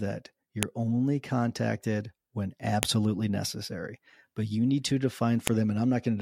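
Sharp snaps at 0.63 s, just before "only contacted when", at 2.83 s, right after it, and at 5.47 s, after "you need to", are a file header played as audio. Joined WAV pieces kept their headers, so the header bytes play as samples. Unlike clipping, each snap appears at a piece boundary regardless of the speech level.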